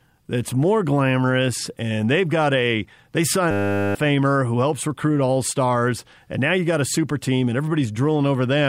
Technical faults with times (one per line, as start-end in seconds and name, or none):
3.51-3.95 system hang loop